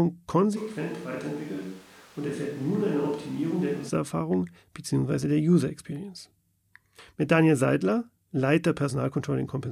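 From 0.58 s to 3.88 s the speech abruptly turns roomy and hollow, loses its low end, drops by around 5 dB, and sits over a bed of room noise roughly 25 dB below the speech. At 3.88 s it snaps back to full, close sound just as suddenly. This is a switch to a distant microphone: the close mic's signal was likely lost, so the recording fell back on a mic further away, which captured more room and less voice.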